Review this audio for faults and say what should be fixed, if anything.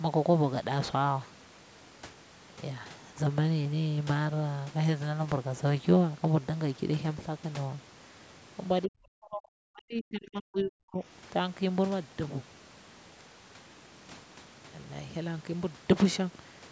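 Speech suppressed in double talk, 8.87 to 11.01 s. The speech sinks by around 40 dB, likely because the echo canceller treats it as echo. Improve the canceller's double-talk detection.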